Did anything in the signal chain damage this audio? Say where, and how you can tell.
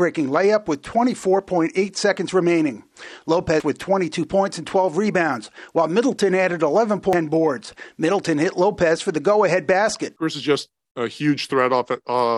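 Yes, at the codec stage. Brief blips at 3.60 s and 7.13 s are damaged data in a compressed stream. Corrupted bytes there made the decoder misread the frames and lose sync. It then hunted for the next valid frame header, producing each short glitch.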